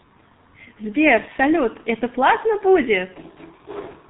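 Throughout, the speech passes through the G.723.1 codec at a rate fitting about 6.3 kbit/s: nothing survives above 4 kHz, making it muffled and hoarse, and the spectrogram shows a hard ceiling with smeared consonants.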